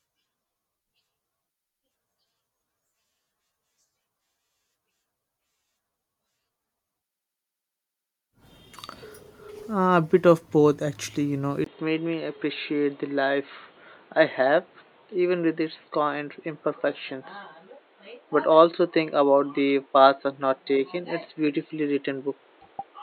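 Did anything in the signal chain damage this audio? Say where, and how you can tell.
Yes. At 11.64 s the speech suddenly turns dull and boxy, and stays that way to the end at 23.02 s. A 20 ms gap marks the change. After it, nothing comes through above 4.3 kHz, and a new noise floor appears, about 35 dB below the speech. The level stays roughly the same. This is likely an input switched to a poorer device at the driver stage, with a narrower band and its own background noise.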